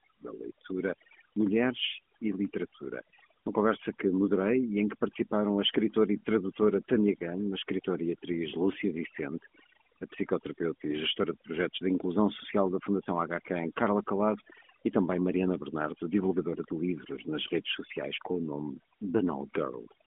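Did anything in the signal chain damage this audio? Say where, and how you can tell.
Yes. At the call-processing stage, overdone noise removal runs through the whole speech clip: the background drops and breaks up into twinkling, warbling specks. The suppressor is pulling individual frequency bands down whenever they approach its noise estimate, taking quiet voice components with them.

At the codec stage, the AMR narrowband mobile codec is plainly audible throughout. Nothing passes above about 3.6 kHz, the band sits roughly between 200 Hz and 3.4 kHz, and the voice has a buzzy, synthetic edge. That degree of buzz fits a mid-range rate around 10.2 kbps.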